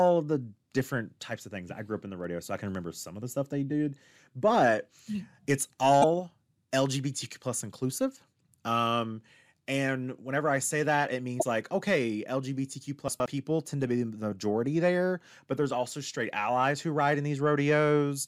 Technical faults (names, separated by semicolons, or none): damaged data in a compressed stream; chunks out of order